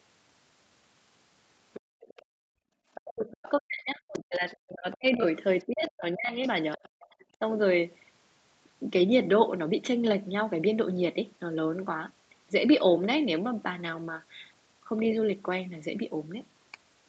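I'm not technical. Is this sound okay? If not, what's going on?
No. The call's echo canceller, the part that should stop the other person's voice looping back through the microphone, likely missed some of it. This is the other side's voice leaking through: a faint second voice at 1.73–2.25, 2.95–3.5, 4.14–4.97, 5.6–5.91 and 6.72–7.25 seconds.

The same canceller also caused the background to be gated by the echo canceller. While the loudspeaker played, it turned the microphone down sharply, so the room sound drops out between 1.81 and 2.76 seconds, for roughly three quarters of a second in all, then returns.

From 3.04 to 7.43 seconds, both people seem to talk at once, and the canceller likely couldn't tell them apart, so it turned everything down. This is speech suppressed in double talk: the talker's voice dips or cuts out in pieces, for about three seconds in total.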